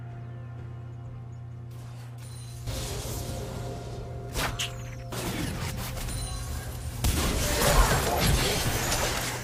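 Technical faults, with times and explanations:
Throughout, mains hum: the signal chain is picking up the 60 Hz power line, most plausibly through a ground loop between connected equipment or from a transformer sitting close to the cabling. The result is a steady low tone at 60 Hz with some low harmonics, sitting only about 10 dB below the wanted sound. At that level the drone is plainly audible under everything for the whole clip.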